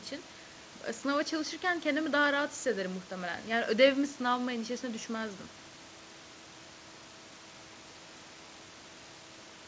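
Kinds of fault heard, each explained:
No kinds of fault are heard in this speech, which comes through a G.722 call path with nothing above 8 kHz.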